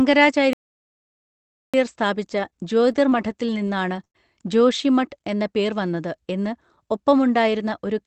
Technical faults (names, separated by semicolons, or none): playback stall; scattered short gaps